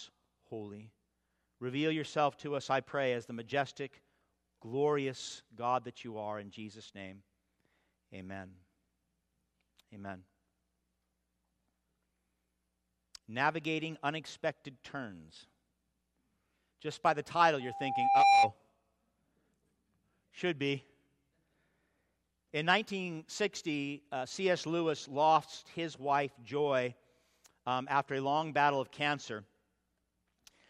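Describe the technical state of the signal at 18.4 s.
A single steady tone near 794 Hz dominates the sound at 18.4 s, having swelled over roughly the previous 0.7 seconds into a squeal that stands about 10 dB above the rest of the audio. This is loudspeaker feedback squeal, running from 17.6 to 18.53 s. A microphone was picking up the loudspeaker it fed, and at that one frequency the loop gain exceeded one, so the tone kept growing by itself.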